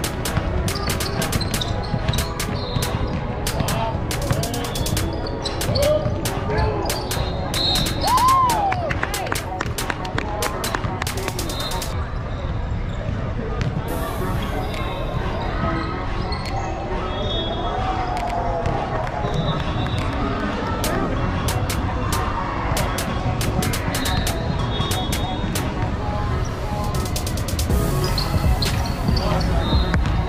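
Overlapping chunks: each 10 s block starts 100 ms before the previous one ends, so a short stretch of sound repeats as a stutter at 8.17, 18.27 and 28.37 s.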